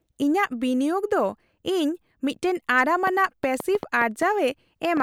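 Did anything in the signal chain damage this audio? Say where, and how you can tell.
Yes. A train of clicks runs from 3.07 s to 5.01 s: around ten similar pulses at an uneven rate of about 4.2 per second, peaking roughly 10 dB above the speech. The likely cause is interference in the analogue wiring. Unlike buffer dropouts, the clicks do not interrupt the speech.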